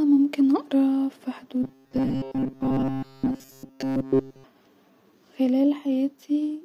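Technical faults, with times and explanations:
1.63 to 4.44 s, robotic sound from repeated short buffers: right after "ممكن أقرأ ف" the speech turns into a stiff, metallic buzz pinned at 134 Hz that still loosely tracks the words. The likely cause is audio arriving too slowly, so the player keeps looping a tiny chunk, around 7.5 ms, which fits that buzz pitch. Most of the stretch is repeats rather than real audio, which is why the buzz sounds so mechanical.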